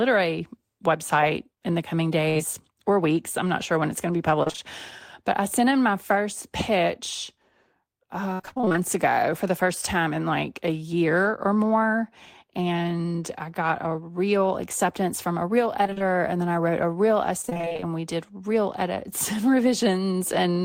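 At 2.29 s there's a burst of packet loss: roughly 60 ms of the speech never arrived, so the receiver stretched the last sound out and faded it, giving a brief held buzz or hiss before the audio picks up further along, with that bit gone. Right behind it, from 2.37 to 2.41 s, comes a short concealed packet loss. Another 20 ms went missing and was patched over, and you hear it as a quick smear as the fill blends back into the real signal.

After that the trouble turns into repeated packet loss, giving a robotic sound, in four stretches: 4.43 to 4.59 s, 8.33 to 8.77 s, 15.84 to 16.10 s and 17.42 to 17.87 s. In each one, packets kept dropping, with gaps of up to about 60 ms in the 8.33 s stretch and about 24 to 31 ms in the others, and about half of each stretch is patched-in sound. The result is choppy, with pieces of speech missing.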